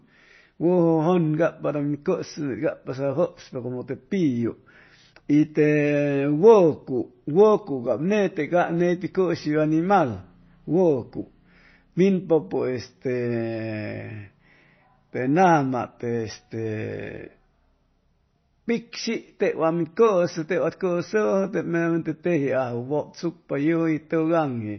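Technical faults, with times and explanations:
throughout: MP3 compression. The speech has nothing above 6 kHz and a watery, swirly texture, with s sounds turning metallic as weak frequency lines flicker between frames. Unlike a simple low-pass filter, that swirl points to a likely starved MP3 encode, fitting 24 kbps.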